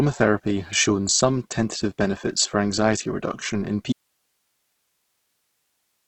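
From the start the speech sounds grainy and rough, with nothing above 8.2 kHz, which points to heavy Opus compression, likely at a low bitrate around 12 kbps, where the encoder runs short of bits and fills bands with noise instead of detail.

Then at 3.93 s the speech cuts out abruptly and never returns. What's left through to the end is just hiss, roughly 50 dB below the signal, so it sounds like an audio dropout to a faint residue, with the path after the break still live.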